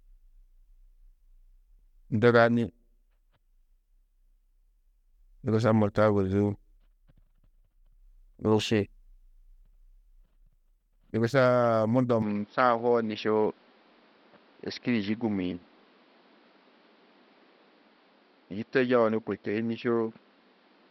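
From 12.22 s to the end, the speech abruptly turns duller, with nothing above 5.7 kHz, a faint new background noise and no gap or jump in level. This most likely marks the input switched to a poorer device, one with a narrower band.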